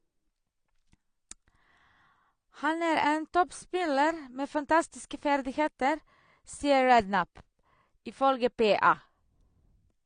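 From start to finish, the speech sounds dull and smeared. Nothing is heard above about 9.7 kHz, and sibilants have a fizzy, warbling edge. This is likely AAC compression, in AAC-LC form, quantising too coarsely at a bitrate around 32 kbps.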